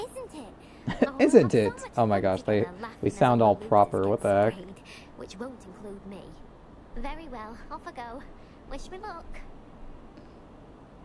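No technical faults are audible.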